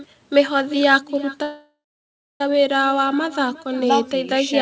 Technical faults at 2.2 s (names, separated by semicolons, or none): echo with no canceller; call audio freeze